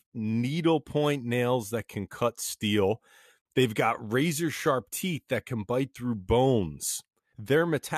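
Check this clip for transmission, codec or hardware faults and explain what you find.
One fault stands out: a gap between stream segments from 3.42 to 3.46 s. The time stamps of two adjacent segments of the stream don't quite meet, leaving about 40 ms uncovered, and the player fills that hole with digital silence rather than stretching or overlapping the audio. In the speech this sounds like a brief, hard-edged dropout, an abrupt cut to nothing and an equally abrupt return. Nothing is missing from the speech itself; it simply resumes 40 ms later.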